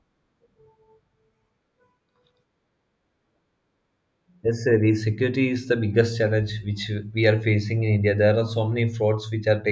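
No technical faults can be heard anywhere in the recording. The speech has nothing in the signal that stands out as a problem.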